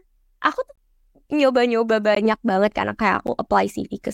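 Three times the output path lets a block of samples drop out, a block of digital silence of the kind left when the audio buffer isn't filled in time. The speech cuts out with no fade. From 0.76 to 0.78 s the 20 ms gap is a brief hole. A 17 ms dropout at 2.15 s is another short hole, and a 10 ms one at 3.27 s is shorter, heard more as a tick.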